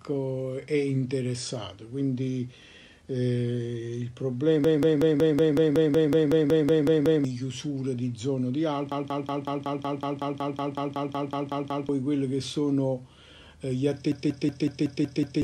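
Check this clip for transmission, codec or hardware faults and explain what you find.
Three system hang loop faults are audible. From 4.64 to 7.25 s, 8.92 to 11.89 s and 14.12 to 15.42 s, the same 186 ms slice of audio repeats exactly, 14, 16 and 7 times, giving a machine-gun stutter at about 5.4 Hz. The host or driver stalled while the playback hardware kept cycling its ring buffer, which fits an 8192-sample buffer. Roughly 3 s, 3 s and 1.5 s of real audio go missing.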